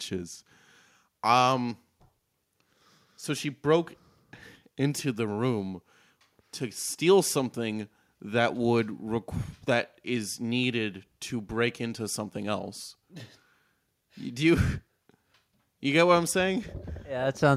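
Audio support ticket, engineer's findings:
No faults found in the signal path: level, continuity and timing of the speech recording hold steady throughout, with nothing in the signal needing attention.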